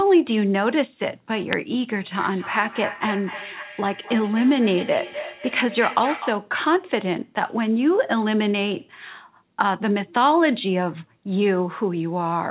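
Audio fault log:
1.53 s uninitialised buffer: a block was played before audio was written into it, so leftover memory comes out as a brief, loud crack.
2.09 to 6.52 s feedback echo between two devices: a second device replays this microphone's signal back into it, so speech returns roughly every 300 ms, peaking about 11 dB below the speech.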